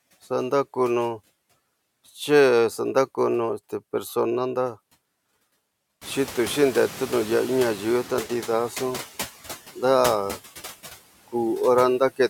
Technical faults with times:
0.00-12.30 noise suppressor artifacts
6.01-8.42 noise suppressor catching up

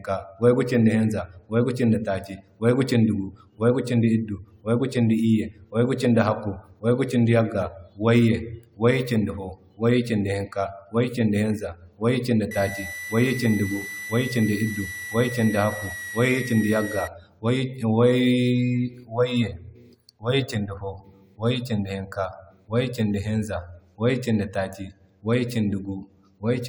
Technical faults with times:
0.00-26.69 generation loss
12.51-17.08 switching supply whistle

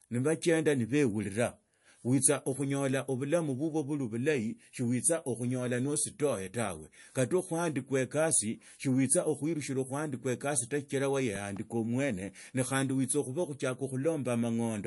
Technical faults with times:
0.00-14.87 MP3 compression
11.36-11.59 loud pop

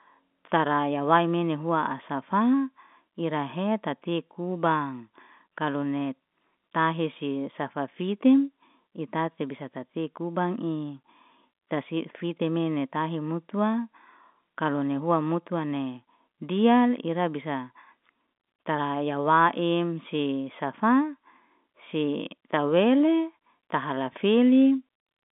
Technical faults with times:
none

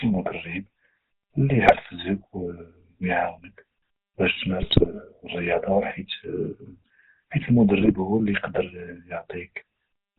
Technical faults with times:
0.00-10.18 GSM full-rate codec
1.66-1.79 GSM bit errors
4.62-4.87 GSM bit errors
7.80-7.96 GSM bit errors

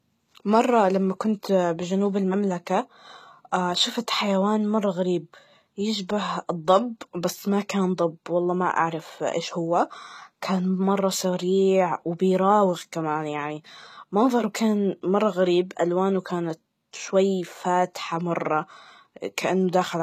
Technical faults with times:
0.00-20.02 HE-AAC compression

